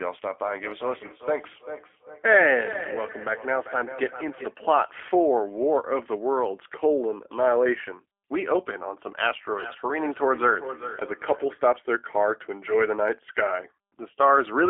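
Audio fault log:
throughout: G.729 codec. The speech is held inside a telephone band from 300 Hz to 3.4 kHz, so the upper consonant detail is missing. The speech also carries a plainly audible rough, slightly synthetic edge. That texture comes from rebuilding the speech every 10 ms frame from a vocal tract filter, a pitch predictor and a handful of sparse pulses, which fits an 8 kbit/s G.729A stream.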